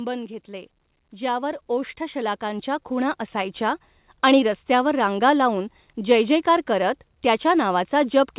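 From 0.46 to 3.88 s, automatic gain rising lifts the level by about 11 dB as the gain control, judging the input too quiet, turns itself up. Speech and background swell together until "आणि रस्त्यावर रांगा लाऊन". The waveform envelope widens steadily, and the spectrogram brightens evenly below its 4 kHz ceiling.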